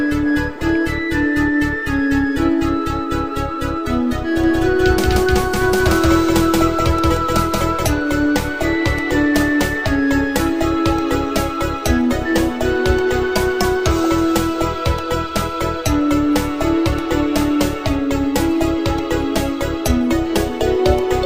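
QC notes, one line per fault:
4.44–7.86 s, doubled audio track: a second full-band copy of the sound runs about a fifth of a second behind, at roughly equal level, with no decay or room colouring. It cuts in and out abruptly, likely from a slower capture path duplicating the signal.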